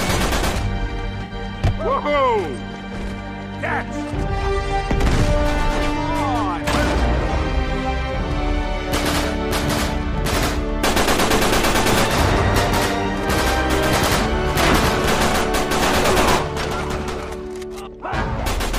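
At 1.24 s to 1.32 s there is AAC frame loss with concealment. Roughly 64 ms of coded audio, which fits about three consecutive AAC frames, never reached the decoder, so it synthesised the gap from the last good spectrum, with randomised signs and carried-over energy. Because the gap is short, the concealment never fades to silence. It is heard as a brief smeared, noisy and phasey patch before normal decoding resumes.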